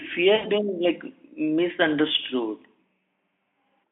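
At 0.35 s, VoIP packet loss concealed by the speech codec cuts in for about 80 ms, roughly four 20 ms frames. The decoder extrapolates, so the sound smears into a fading buzz until "like misunderstood".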